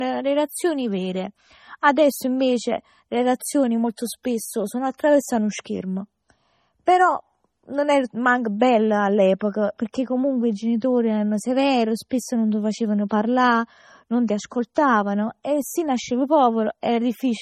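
From start to finish the speech carries smeared, watery artefacts, with nothing above about 16.1 kHz. The likely cause is low-bitrate audio saved at a high bitrate: damage fitting a 32 kbit/s MP3 survives a 192 kbit/s re-encode. Unlike a plain low-pass, the swirl remains.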